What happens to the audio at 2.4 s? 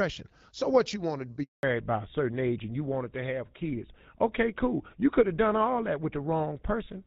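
By 2.4 s the speech has gone dull and rougher, as if heard down an old landline: nothing above 4 kHz remains. That loss began at 1.63 s and lasts to the end of the clip. It is a fallback to narrowband, where the call drops from the clear HD Voice wideband codec to an older narrowband one, consistent with GSM full rate, which cannot carry the upper band and adds its own coarser texture.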